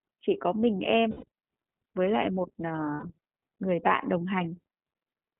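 From start to finish, the speech passes through the iLBC codec. The band is held to about 150 Hz to 3.4 kHz, so everything above is gone. Each frame is coded on its own, with no help from the one before. The damage is plainly audible. The voice sounds rough and slightly synthetic. The frame timing fits 30 ms frames, and the texture fits the 13.33 kbps iLBC mode.

At 1.11 s, 120 ms of audio drops out, ending at 1.25 s. That fits four lost iLBC frames. The decoder fills the hole by repeating the last pitch cycle with noise mixed in. It sounds like a held, faintly buzzy vowel. At 2.94 s a shorter 90 ms gap follows, ending at 3.04 s. Both times the voice comes back clean almost immediately.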